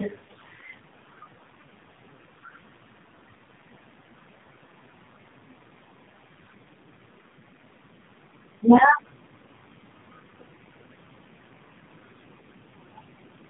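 Speech, with tandem speech coding throughout: nothing above 3.8 kHz, and a rough, muffled, warbly texture beyond what one low-rate codec pass leaves, which fits two AMR-NB encodings joined by a G.711 link, each coder re-encoding the previous one's damage.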